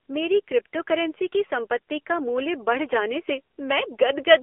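Speech runs through the whole clip on an AMR narrowband mobile codec, with the band confined to roughly 300 Hz to 3.4 kHz and a plainly audible buzzy, synthetic edge that fits a low AMR-NB mode near 7.4 kbps. The codec rebuilds the voice from a vocal-tract model excited by sparse pulses in 20 ms frames, so on a spectrogram everything stops flat below 4 kHz, with a bare floor under 300 Hz and smeared, quantised harmonics between.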